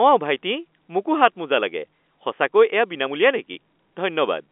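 Telephone speech, band-limited to roughly 250 Hz–3.5 kHz by the phone line and carried in G.711 A-law coding, has a packet loss with pitch repetition at 3.54–3.56 s. About 20 ms went missing, which fits a single lost packet, and the receiver bridged it by repeating the last pitch period, giving a brief held, buzzy tone. The waveform shows repeated cycles there, and the spectrogram shows flat, frozen harmonic stripes.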